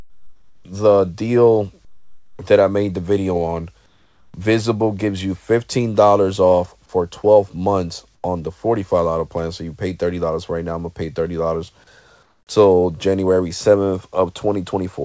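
Comfort noise in place of the background fills the pauses at 0.0 to 0.65 s, 1.85 to 2.39 s, 3.86 to 4.34 s, 8.15 to 8.24 s and 12.23 to 12.47 s. The background there, some 41 to 45 dB below the loudest passages, turns into a flat, featureless hiss about 4 to 9 dB quieter, likely because the sender stopped transmitting and the receiver synthesised noise until sound resumed. Through these gaps, as elsewhere, nothing is heard above 8 kHz.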